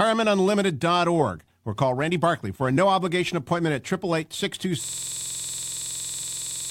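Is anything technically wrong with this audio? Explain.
Yes. A system hang loop runs from 4.84 s to the end: the playback froze while the hardware kept replaying one 46.4 ms buffer, which fits 2048 samples, producing a rapid 21.5 Hz stutter.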